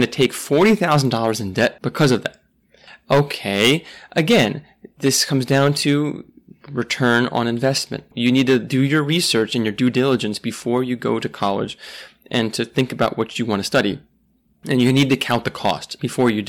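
Hard clipping runs through the whole speech clip. The signal is driven about 13 dB past what the stage can pass. Every peak above that ceiling is cut flat. Only a small share of the samples, around two percent, hit the limit. Those flat tops add harmonics high up the spectrum. The result is a harsh, crackling fuzz on each loud syllable. Quieter stretches pass cleanly between the bursts of distortion.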